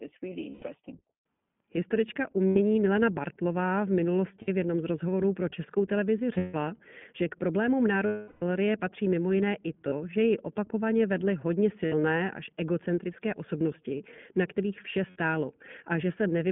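Throughout, the speech passes through the iLBC codec. The line is narrowband, about 150 Hz to 3.4 kHz, and sounds rough and synthetic, which fits 20 ms frames at about 15 kbps.

Lost iLBC frames cause gaps at 0.50 s (120 ms), 2.49 s (80 ms), 4.42 s (60 ms), 6.34 s (180 ms scattered, longest run about 150 ms) and 8.06 s (360 ms). Further gaps fall after "patří mimo jiné i" at 9.88 s (40 ms), after "ji opakovaně vedly hodně" at 11.86 s (60 ms), and after "osobnosti na kterých vše" at 15.10 s (60 ms). In each one, the decoder repeats the last pitch cycle with added noise, so you hear a held, buzzy vowel. The 360 ms gap fades, and the voice recovers almost at once after each gap.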